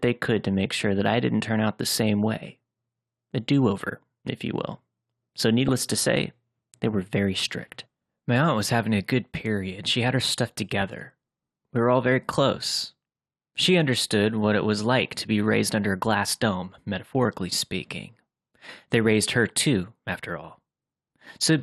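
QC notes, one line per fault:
throughout: MP2 compression. The speech sounds dull and granular, with a gurgling edge. The likely cause is MPEG Layer II coding at a low rate, around 80 kbps, which shuts off upper sub-bands and quantises the remaining ones coarsely, so bands flicker in and out.
5.68–5.90 s: DAB burbling. A short burst of burbling sits over the speech. Bit errors at a small fraction of a percent got through error correction into a run of frames, corrupting samples so short blips of noise land in single sub-bands.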